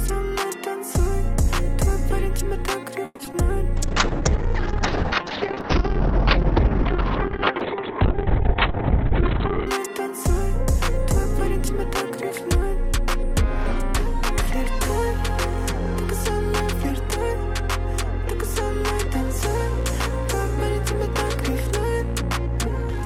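Between 3.05 and 3.34 s the audio breaks up with repeated packet loss, giving a robotic, choppy texture. Four gaps fall in this 0.29 s stretch, the longest 140 ms. Most of the span, around 59%, is filled by extending the preceding sound, and about 40 ms drops out entirely. Shortly after, from 3.77 to 9.73 s, a call bitrate drop makes the sound coarse and watery. The top end is cut from a full 20 kHz band to about 4 kHz, which fits the encoder being pushed from roughly 48 kbps down to around 7 kbps. It stays at that floor for about 5.9 s before recovering. Overlapping the end of that stretch, from 8.87 to 12.70 s, a jitter buffer speed-up plays the audio at about 103% speed with pitch unchanged. The receiver drains excess buffered delay by cutting short pitch-period-length pieces, removing roughly a tenth of a second in total.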